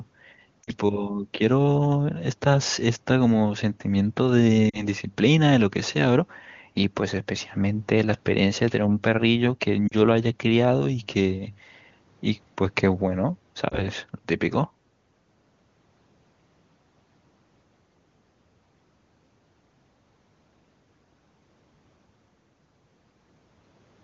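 Radio errors corrupted short stretches of the AMR wideband stream, so the decoder discarded those speech frames and filled the gaps by repeating the last good pitch and vocal tract settings at falling gain. These are lost AMR speech frames, at 0.64–0.71 s, 4.69–4.86 s, 9.88–9.95 s and 13.70–13.85 s. The first three drop to near silence, each pointing to about 40 ms of missing speech, and the last is a brief dip or warble, pointing to about 20 ms. Around them the HD Voice sound is clear, though the voice comes back weak or rough for a moment after each gap.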